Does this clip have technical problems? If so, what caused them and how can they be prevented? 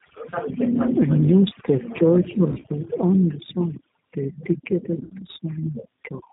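Yes. Overdone noise removal runs throughout: a noise reducer set too aggressively has pushed bands near its noise estimate almost to silence, removing quiet parts of the speech with them. The background is near silent with twinkling specks. Prevent it by using gentler reduction settings or by recording in a quieter space.

The G.729 codec, apparently the G.729A variant, also affects the whole clip. The speech is rebuilt from a vocal tract filter, a pitch predictor and a few pulses per frame, and nothing above 4 kHz survives, which fits 8 kbit/s. The result sounds plainly rough and synthetic. Prevent it by choosing a wideband, higher-rate codec where the network allows.

VoIP packet loss concealed by the speech codec occurs from 2.52 to 2.66 s, between "new stave church" and "on the site". About 70 ms of audio is missing, spread over 120 ms, with gaps up to 30 ms. A second event occurs from 5.05 to 5.11 s, with about 50 ms missing. 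In both places the decoder extends its last pitch and filter at falling gain, so the speech smears into a fading buzzy tone or coloured noise and stays weak briefly afterwards. Prevent it with a more reliable network path, prioritised voice traffic, or forward error correction.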